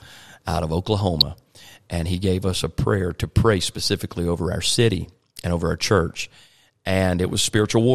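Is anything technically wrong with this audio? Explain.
Yes. At 1.20 s, right after "out of", there's a short burst of DAB burbling: stray bit errors slipped past error correction, briefly putting short blips of noise into single sub-bands. It sounds like a few quick watery blips.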